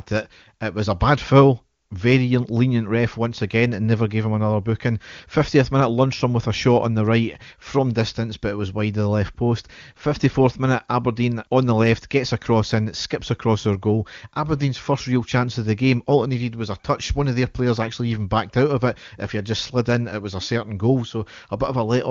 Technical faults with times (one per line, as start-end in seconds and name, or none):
none